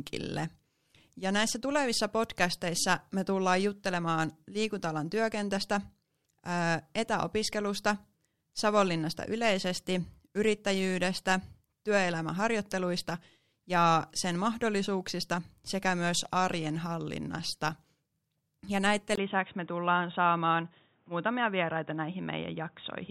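At 19.15 s, after a 20 ms gap, the speech turns dull and boxy through to the end, most likely an input switched to a poorer device. A spectrogram shows nothing above 3.8 kHz and a new noise floor about 40 dB down, while the waveform's level barely changes.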